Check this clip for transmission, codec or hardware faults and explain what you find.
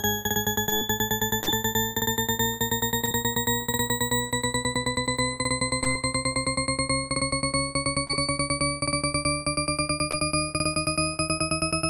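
There are six short concealed packet losses, at 0.69–0.73, 1.43–1.60, 3.05–3.09, 5.84–5.87, 8.07–8.11 and 10.11–10.27 s. Each sounds like a brief smear or wobble. About 20 ms of audio was missing each time, or 40 ms at 1.43 s, and the receiver bridged the gap by extending the preceding sound, either from its pitch or as shaped noise, before blending back. At 1.43 s and 10.11 s the repair also stretched things by roughly 10–15 ms.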